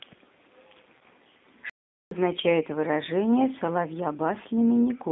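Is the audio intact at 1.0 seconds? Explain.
No. Between 0.99 and 1.02 s, about 20 ms of packets went missing, which fits two 10 ms frames, and the decoder filled the gap with VoIP packet loss concealment by the speech codec, extending its last pitch and filter at falling gain. That gap sounds like a brief buzzy or noisy smear, and the speech stays weakened or distorted just after it while the decoder recovers.

Underneath, the whole passage is carried by the G.729 codec, which points to an 8 kbit/s G.729A-style link. It rebuilds speech from a vocal tract model and a few pulses per frame inside a 200 Hz to 3.6 kHz band, so at this moment the sound is narrowband, rough and plainly synthetic.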